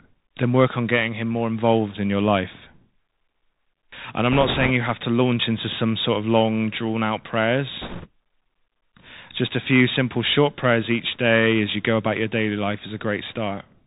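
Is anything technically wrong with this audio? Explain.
Yes. The whole speech clip has passed through a Bluetooth CVSD headset codec, and it has two bursts of bit errors.

Bluetooth CVSD headset codec, throughout: each sample becomes a single up-or-down bit at 64 kHz with an adapting step, so nothing above 4 kHz survives. Loud high sounds outrun the step and distort, sibilants turn scratchy, and a granular hiss sits under the speech.

Bit errors on a Bluetooth voice link, 4.32 to 4.71 s (just before "you have to launch") and 7.82 to 8.07 s (just after "of long drawn out"): flipped bits, around 3 to 4 percent, each nudge the waveform in proportion to the speech level and fade, giving rushing, crackly noise rather than sharp clicks.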